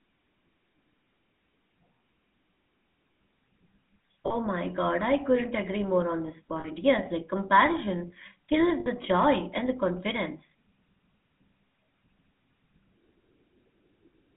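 From start to finish the speech carries the signature of the GSM full-rate codec. The coder models the vocal tract and drives it with a sparse, regularly spaced pulse excitation, so the voice takes on a buzzy, gravelly roughness that is plainly audible, and the character fits the 13 kbps full-rate coder. The line band runs from about 200 Hz to 3.5 kHz, leaving the sound thin and lacking both low body and upper presence.

At 4.26 s, 6.6 s and 8.8 s there are lost GSM frames. Each time, the decoder fills the gap by reusing the parameters of the last good frame, so the sound briefly freezes into a rough, metallic ring. The first two gaps cover about 40 ms each and the third about 60 ms. All three are too short to fade fully to silence before normal decoding resumes.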